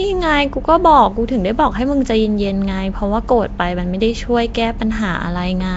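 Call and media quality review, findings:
Rough, hissy halo and smeared, underwater quality on speech, whole clip; no content above 7.7 kHz. Likely Nellymoser compression: blockwise coding at a low fixed bitrate starves weak bands, which are filled with noise.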